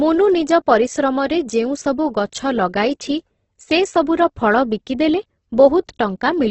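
From start to finish the speech sounds grainy and rough, with a noisy texture where clean tones should be and nothing above 8.2 kHz. This is likely heavy Opus compression in its music mode, with starved bands filled by folded or noise-like content, consistent with roughly 12 kbps.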